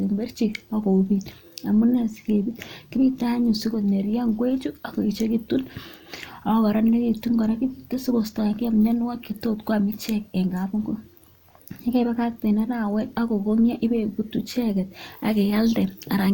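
No technical faults can be heard anywhere in the speech. There is nothing to place on a timeline.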